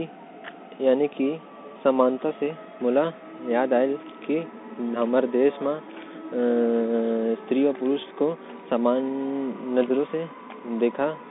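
Speech passed through a Bluetooth CVSD headset codec throughout, which fits a 64 kbit/s one-bit delta stream, leaving a 150 Hz to 3.7 kHz band, plainly audible granular hiss, scratchy sibilants, and distorted loud highs.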